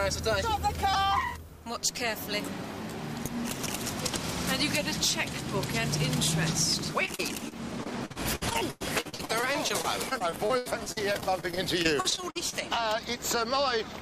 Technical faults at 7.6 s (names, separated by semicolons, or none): repeated packet loss (robotic sound)